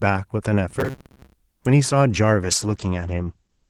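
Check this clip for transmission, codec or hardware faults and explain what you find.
Three separate faults show up in this speech clip.

From 0.69 to 1.34 s there's robotic sound from repeated short buffers: a rigid, metallic buzz at about 133 Hz riding on the speech. That pitch fits a loop of roughly 7.5 ms, so the likely cause is late-arriving audio being papered over by replaying the last short buffer, with about half the material there being repeats.

At 1.65 s there's an electrical switching spike, a sharp snap lasting about 3 ms laid over the audio. It's most likely a nearby switch or static discharge arcing and getting coupled into the audio line.

From 2.44 s to the end there's a call bitrate drop. The encoder goes from 32 kbps down to 12 kbps and the bandwidth narrows from 20 kHz to 8 kHz. Coarser coding plus the lost top end makes the speech sound duller and rougher for the last 1.26 s or so.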